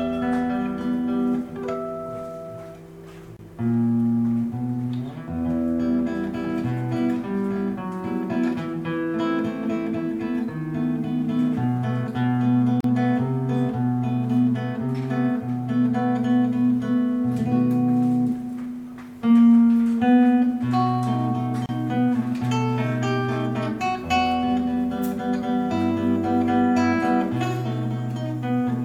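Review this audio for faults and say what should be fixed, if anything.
Gaps at joins of encoded pieces at 3.37 s (27 ms), 12.81 s (38 ms) and 21.66 s (30 ms): untrimmed encoder start delay and final-frame padding leave brief silences with smeared edges before the sound resumes. To prevent this, encode the material as one continuous stream, or trim each piece's encoder delay and padding before joining.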